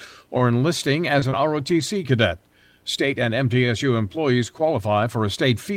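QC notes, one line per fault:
1.19–1.24 s and 1.30–1.33 s, short concealed packet loss: about 20 ms of audio twice failed to arrive, the first time right after "or enlisting". The decoder extended the preceding sound for 24 ms and then 15 ms before blending back, heard as a brief smear or wobble. On a spectrogram, frozen, flattened spectral bands bridge each gap.
1.22–1.24 s, 1.31–1.33 s, 1.59–1.61 s, 1.80–1.82 s, lost packet rebuilt from error correction: four 20 ms packets were played from the low-bitrate copies carried in the following packets, so nothing drops out, but each frame sounds rougher and noisier. On a spectrogram they appear as narrow blocks with blurred harmonics and a raised, grainy noise floor.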